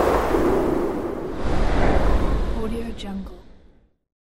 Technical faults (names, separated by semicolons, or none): none